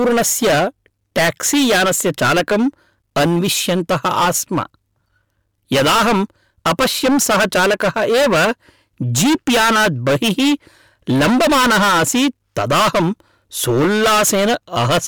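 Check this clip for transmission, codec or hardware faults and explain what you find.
One fault runs through the whole recording: hard clipping.

From start to finish the speech carries a harsh, buzzing fuzz on every loud stretch, not just occasional crackle on peaks. The signal is driven about 26 dB beyond what a stage in the chain can pass, so nearly a third of the waveform is sliced flat at the ceiling. Those squared-off tops generate strong harmonics high up the spectrum, which is the grating distortion heard throughout.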